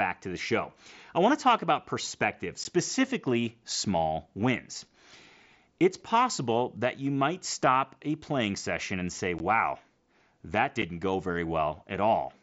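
At 2.64 s, after "wanna talk about perspective", and at 9.39 s, after "playing session and say", unconcealed Bluetooth headset packet loss leaves 15 ms holes. A 7.5 ms hole follows at 10.82 s, just before "go very". The headset's voice packets never arrived and silence or an idle pattern replaced them, so each gap cuts off abruptly. The hole lengths fit two lost mSBC frames and then one.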